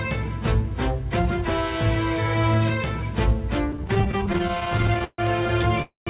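From 3.72 to 5.20 s, repeated stalls (stutter) occur as packets keep arriving late and the jitter buffer repeatedly runs dry. The receiver stretches the last sound across two dozen short gaps, the longest about 141 ms, filling roughly a quarter of that stretch, so the audio drags and stutters with nothing lost. At 5.82 s a call audio freeze follows, likely from packets being held up and emptying the buffer. The last sound is held as a fading buzz or hiss that drops to silence for about 150 ms, inserting a pause of about 243 ms before the audio resumes where it stopped. Throughout, the band ends at 4 kHz, which fits a G.711 mu-law call path.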